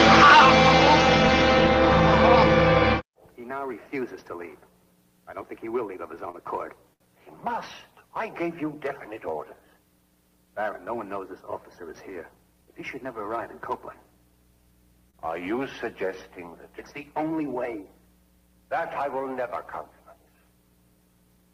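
Three short stalls from a late packet land at 6.31–6.37 s, 6.94–7.03 s and 15.11–15.17 s. Each time the jitter buffer ran dry, so the receiver held the last sound for 23, 65 and 30 ms, then carried on without losing anything.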